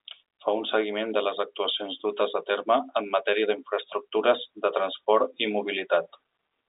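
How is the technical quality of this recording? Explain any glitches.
Nothing stood out on listening to this telephone-band speech recording, so there are no glitches to explain.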